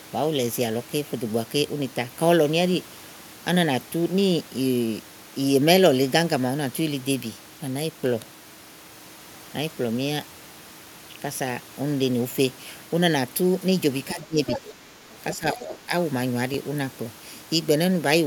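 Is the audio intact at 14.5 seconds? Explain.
No. Other side's voice leaking through occurs from 14.47 to 14.74 s, a scrap of a second voice lasting about a quarter of a second and sitting roughly 10 dB below the main speech. The likely cause is an echo canceller that failed to fully remove the far end's audio, which the talker's loudspeaker was playing and the microphone picked up again, so a fragment of the other party slips through alongside the talker.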